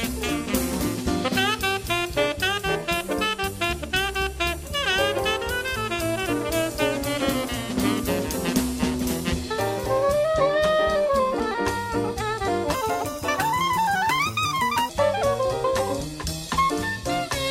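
From 12.74 to 14.89 s there is a wrong sample rate fault. The audio plays 1.5 times too fast, with pitch raised about seven semitones. Speed and pitch rise together. That fits material recorded at 32 kHz but played back at 48 kHz without conversion.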